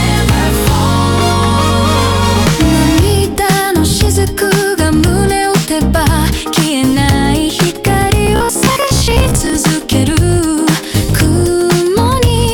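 Hard clipping runs through the whole clip. The signal is driven about 5 dB past what the chain can pass. About one sample in twenty hits the ceiling and is cut flat. Those flat tops add high harmonics, heard as crackle on the peaks.

From 8.27 to 9.56 s the sound turns robotic. It takes on a rigid, metallic buzz at 66.8 Hz. The likely cause is repeated short buffers. A chunk of about 15 ms is replayed over and over while roughly half the real audio is skipped.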